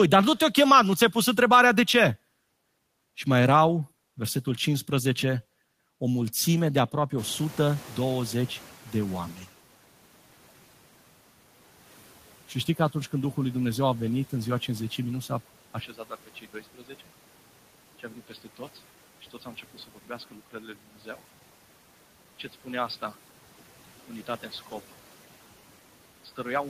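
In this speech recording, the background noise jumps up around 7 s as the room noise rises by about 18 dB. From 7.17 s to 9.49 s it stays loud and then gradually sinks by about 11 dB. This is the noise suppressor catching up, its noise estimate taking some 2.3 s to adapt to the new level. At 15.8 s the sound turns abruptly dull and a little quieter, with no gap, and stays that way to the end. The likely cause is the input switching to a poorer device with a narrower band.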